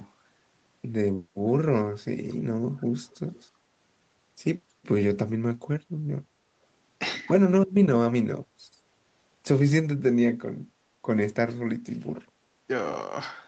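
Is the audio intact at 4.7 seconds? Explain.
Yes, at 4.7 seconds the speech is intact, with nothing there beyond the normal call path, whose Opus coding stops the sound at about 8 kHz.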